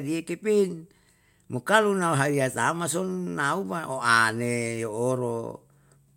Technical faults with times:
none

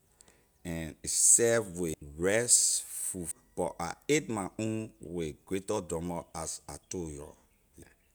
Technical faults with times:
1.04 compressed frames skipped
1.93 compressed frames skipped
3.31 compressed frames skipped
7.82 compressed frames skipped

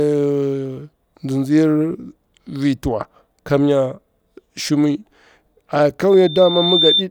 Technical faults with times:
6.10-7.04 loudspeaker feedback squeal

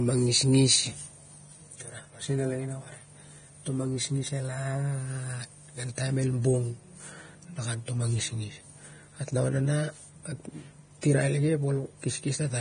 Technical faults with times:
0.00-12.60 Vorbis compression

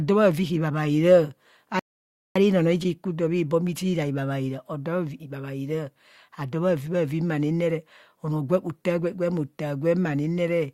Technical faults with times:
1.79-2.36 rebuffering stall

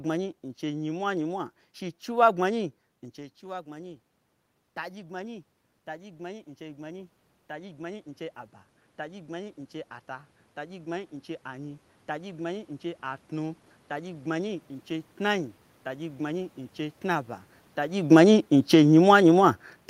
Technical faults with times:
4.87-8.14 automatic gain rising
8.97-14.37 automatic gain rising
17.97-19.44 automatic gain falling

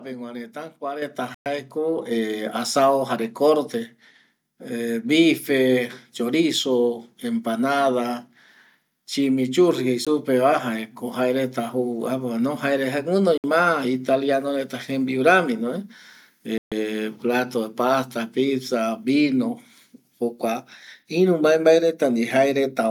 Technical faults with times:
1.02 microphone volume stepped up
1.34-1.46 Bluetooth stall
2.11 microphone volume stepped up
10.05 Bluetooth stall
13.38-13.44 Bluetooth stall
16.58-16.72 Bluetooth stall

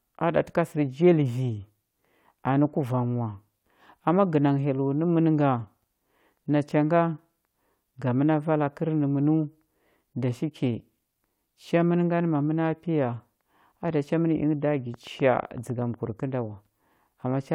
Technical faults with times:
14.94-16.21 train of clicks

